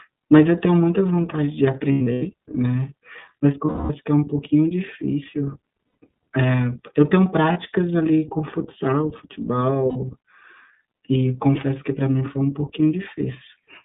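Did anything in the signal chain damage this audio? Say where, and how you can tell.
Yes. The iLBC codec (codec stage) runs throughout: band limited to 150 Hz–3.7 kHz with a rough, synthetic edge, which fits its 30 ms-frame, 13.33 kbps mode.

Lost iLBC frames (network stage) at 1.92–2.22, 3.66–3.92, 5.87–5.96, 7.53–7.58 and 9.89–9.97 s. The decoder repeats the last pitch cycle with noise, giving held buzzy vowels before clean recovery.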